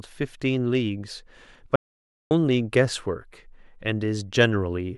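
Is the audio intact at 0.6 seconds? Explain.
Yes, at 0.6 seconds the speech plays through intact, with no dropout, click, distortion or other fault at that point.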